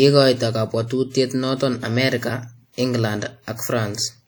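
From start to end, WMA compression smears the speech into washy ringing and signal-following hiss, likely from a 48 kbps WMA 1 encode. Unlike band-limited codecs, content still reaches 20.1 kHz.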